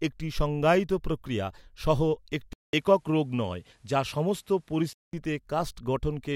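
At 2.53 s the speech drops out for about 200 ms, then returns with nothing above 13 kHz, a slightly duller tone, and a faint new background noise around 45 dB below the speech, while the level stays about the same. This continues until 5.13 s, when the full band comes back. The pattern is most likely an input switched to a poorer device, with the system changing its input mid-recording and then changing back.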